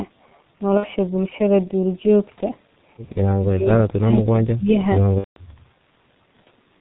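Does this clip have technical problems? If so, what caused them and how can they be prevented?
Yes. The whole clip has been coded with G.723.1 at about 6.3 kbit/s, and the damage is heavy. Everything above 4 kHz is missing, so the speech sounds muffled and hoarse. The slowly updated 30 ms frame model also smears consonants together. Prevent this by negotiating a wideband codec such as G.722 or Opus instead of G.723.1.

VoIP packet loss concealed by the speech codec occurs at 0.77 to 0.88 s and at 5.18 to 5.40 s. The first gap is 60 ms, which fits two lost 30 ms frames, and the second is 180 ms, which fits six. In each gap the decoder repeats its last pitch and filter with falling gain, so the sound fades out, and in the second gap it is muted from the third lost frame onward. It stays weak briefly after the gaps. Prevent this with a cleaner network path, QoS marking, an adequate jitter buffer or forward error correction.

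Speech suppressed in double talk hits 3.54 to 4.14 s and 4.31 to 4.79 s. Over around 400 ms in each stretch the level dips by about 25 dB. The likely cause is the echo canceller mistaking overlapping far-end speech for echo and attenuating both. Prevent this with a better double-talk detector or a headset, which removes the loudspeaker echo.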